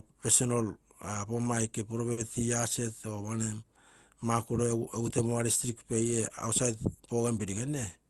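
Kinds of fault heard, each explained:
Short stall from a late packet: at about 2.12 to 2.19 s in this speech, a packet turns up late and the jitter buffer runs dry. The receiver covers the gap by stretching the last bit of sound for about 50 ms until the data arrives. Nothing is lost; playback resumes from the same spot. You hear a briefly held, slightly buzzy smear, and everything after it lands 50 ms later.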